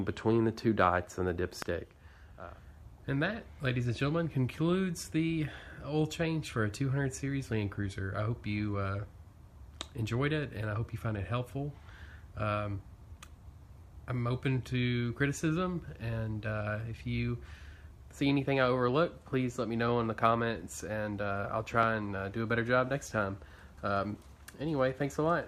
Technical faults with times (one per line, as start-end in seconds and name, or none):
1.62-1.64 loud pop
21.83-21.85 loud pop